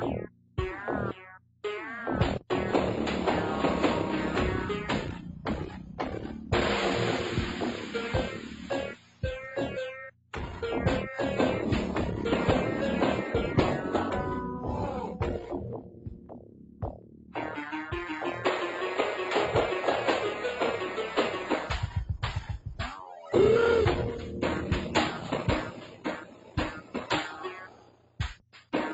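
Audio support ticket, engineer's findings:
Noise suppressor applied to music or sounds, whole clip: level pumps by about 15 dB as a speech-tuned suppressor treats steady and held material as noise. Attacks pass, sustains and tails sink.

Sound cut by the noise suppressor at 0.27–0.58, 1.37–1.64, 5.19–6.52, 8.32–9.23, 10.1–10.33, 15.07–17.36 and 25.64–28.74 s: pulled down by about 15 dB, except about 8 dB at 5.19–6.52 s. Suppressor misclassifying these stretches.

Nothing above 8 kHz, fits an Opus call path around 32 kbps plus mic processing. Not a fault.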